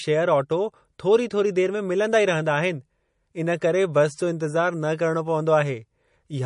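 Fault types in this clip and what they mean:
MP3 compression: The speech has nothing above 10.5 kHz and plainly audible coding damage throughout. Likely MP3 encoding starved of bits, fitting about 40 kbps.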